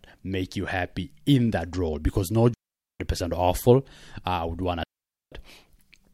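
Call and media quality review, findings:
Digital wireless dropout, speech, two events. 2.54–3.00 s, 0.46 s mute. 4.83–5.32 s, right after "I would want", 0.48 s mute. Clean near-silent holes, fast fade, no noise bursts. Receiver muting on lost RF data.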